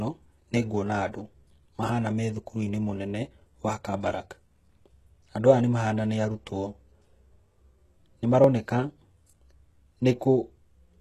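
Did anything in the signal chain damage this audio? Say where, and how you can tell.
Yes. Throughout the speech, sibilants sound gritty and metallic, and the treble feels synthetic, with nothing above 12.3 kHz. This points to heavy HE-AAC compression at the codec stage, likely at a very low bitrate near 16 kbps, with upper bands rebuilt from copied lower ones.

At 3.47 s and 8.44 s the speech skips forward, losing about 20 ms with no silent gap. The two skips are five seconds apart, which suggests audio missing between chunks in the buffer stage, likely dropped as each 5-second block closed and the next opened.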